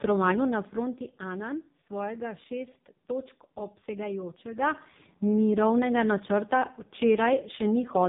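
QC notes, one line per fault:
throughout: AMR narrowband mobile codec. Speech is cut off hard at 3.8 kHz, a flat ceiling on the spectrogram, and sounds heavily buzzy and synthetic, which fits a very low bitrate.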